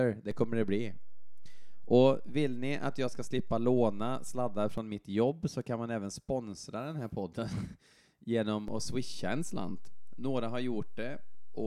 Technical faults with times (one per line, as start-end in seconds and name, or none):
0.31-4.78 DC step
8.68-11.66 DC step